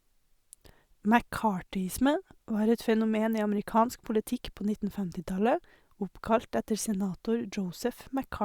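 A speech recording with nothing technically wrong with it.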